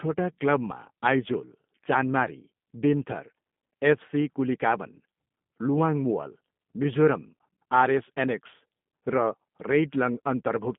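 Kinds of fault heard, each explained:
G.729 codec: The speech sounds plainly rough, buzzy and somewhat synthetic throughout, confined to about 150 Hz–3.5 kHz with nothing above 3.8 kHz. The voice is being rebuilt from a vocal-tract model and sparse pulses, which fits an 8 kbit/s G.729A VoIP path.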